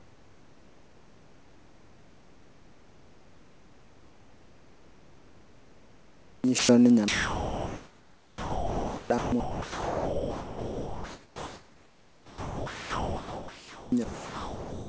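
Much of this speech clip is missing, replaced by a flat, steady hiss. That is sound dropped by the voice detector, most likely because the sender's detector misread speech as background and stopped transmitting, so the receiver filled the gaps with comfort noise. It happens six times: 0.0–6.44 s (about 4.5 s of real speech lost), 6.59–6.69 s, 7.08–9.10 s (about 1.3 s lost), 9.18–9.32 s, 9.40–13.92 s (about 3.1 s lost) and 14.04–14.87 s. Speech returns each time the detector retriggers. From 6.46 to 6.89 s there is a jitter buffer slow-down. The receiver repeated pitch periods to build up its reserve, adding 41 ms, so the audio plays at about 92% speed at unchanged pitch, slightly drawn out. The call path's bandwidth, with nothing above 8 kHz, fits G.722.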